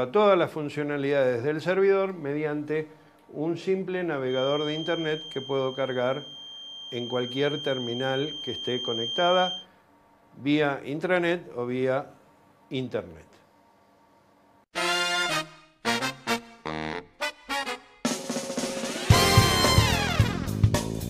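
The audio carries a feedback whistle from 4.22 s to 9.68 s: a thin, steady tone at 3.2 kHz, sitting roughly 10 dB below the main signal and swelling and fading slowly in level. The likely cause is a loudspeaker-to-microphone loop held just at the threshold of feedback.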